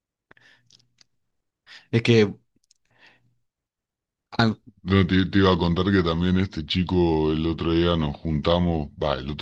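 Speech, with a section at the wrong speed from 4.69 s to the end at 9.41 s: playback drops to 0.821 times, likely from resampling against the wrong clock. Unlike a pitch shift or time-stretch, tempo and pitch fall together, voices slowing and deepening by about three semitones.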